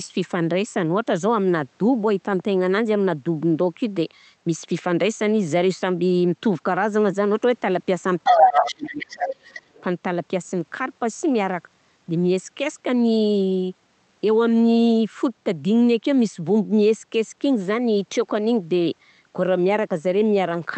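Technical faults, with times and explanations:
8.24–8.93 s and 9.10–9.82 s, other side's voice leaking through: an echo canceller likely failed to remove loudspeaker playback, so a second voice intrudes, first about 5 dB louder than the talker, then about 10 dB quieter.
8.24–9.36 s, speech suppressed in double talk: with both sides talking at once, the canceller likely turned everything down, so the talker's voice dips by up to about 30 dB for roughly a second.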